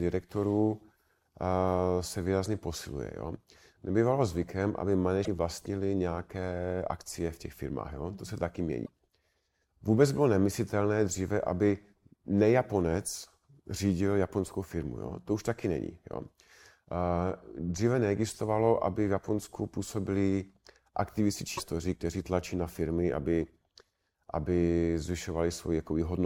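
A likely broken MP3 bit reservoir, where frames cut from the stream leave the next ones reading borrowed data from the wrong place, consistent with 26 ms frames. The speech jumps with a brief glitch at 5.24–5.28 s after "zvykem aby", at 8.84–8.89 s after "se taky mění", and at 21.57–21.60 s after "působili aktivisti".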